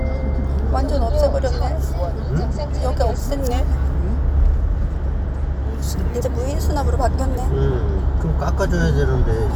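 From 5.88 s to 8.01 s, speed and pitch rise together by about 5.4%, roughly a semitone sharp, then snap back. This is a drift correction step. Clock-matching software likely changed the playback rate in one jump to rebalance its buffer. It sounds like sudden detuning.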